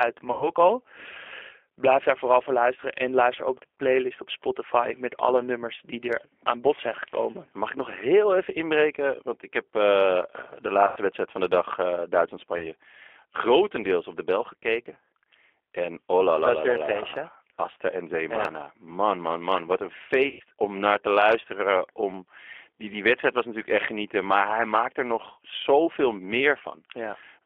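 Throughout, the speech carries G.729 codec coding at 8 kbit/s, band-limited to 300 Hz to 3.5 kHz, giving a plainly rough, synthetic texture. VoIP packet loss concealed by the speech codec appears at 0.32–0.50 s, 10.87–10.99 s before "wedstrijd van de dag", 12.58–12.71 s before "grotendeels op de bel", and 20.28–20.42 s before "om naar te". In each, the decoder extrapolates from its last pitch and filter over gaps of 30 to 120 ms, giving a fading buzzy tone or coloured noise.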